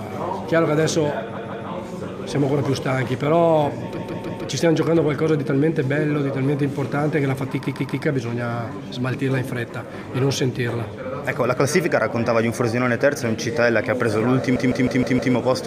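Repeated frames cause a stutter four times. At 1.36 to 1.67 s, a 0.16 s block plays twice more. At 3.97 to 4.44 s, a 0.16 s block repeats three extra times. At 7.63 to 8.02 s, a 0.13 s block repeats three extra times. At 14.55 to 15.34 s, a 0.16 s block plays five extra times. Each block fits a short run of compressed frames sent again. Each stutter lengthens the sound.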